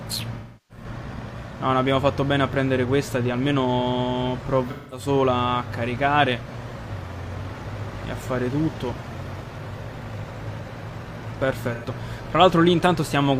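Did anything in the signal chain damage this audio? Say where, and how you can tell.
Yes, there's AAC frame loss with concealment between the codec and network stages, at 0.35–0.84 s, 4.70–5.07 s and 11.74–11.86 s. Each patch sounds smeared, noisy or phasey because the decoder rebuilds missing frames from the last good spectrum. The longest gap fits about eight lost frames.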